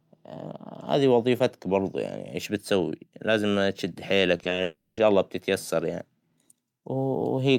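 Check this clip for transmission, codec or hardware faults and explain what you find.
Two transmission faults occur close together in this speech clip, both just after "ايش بتسوى لآزم بتشد".

From 4.37 to 4.59 s there is repeated packet loss (robotic sound). Four short gaps, none longer than 20 ms and about 80 ms in total, are patched by repeating the preceding sound, giving a choppy texture. On a spectrogram the harmonics smear into flat, repeated slices, and the waveform shows small looped segments.

From 4.63 to 4.99 s a 340 ms stretch is missing and replaced by a sustained, fading continuation of the last sound, with no true silence. Speech resumes at "الله بتتيسر يعنى". This is likely a long network dropout. A spectrogram shows a smeared, decaying band with no speech structure, and the waveform shows a tapering, featureless envelope.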